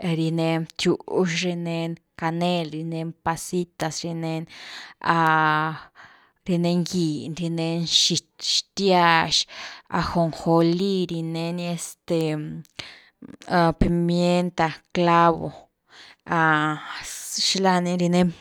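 Sharp, broadband ticks at 3.81, 5.27 and 12.21 s, peaking around -9, -15 and -15 dBFS, are bit error spikes: flipped bits briefly jumping two or three samples.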